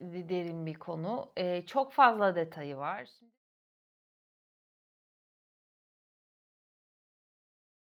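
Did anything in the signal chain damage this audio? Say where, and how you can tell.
No, nothing in the signal chain has damaged this speech. The level fades out smoothly, as an editor would, from roughly 2.5 s until the fade ends at 3.39 s, with no click or hard edge.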